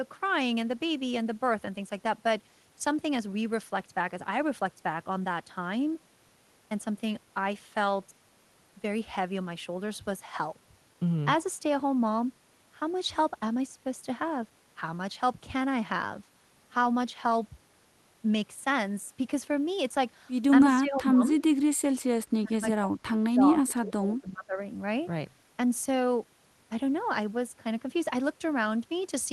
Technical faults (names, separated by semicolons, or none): speech suppressed in double talk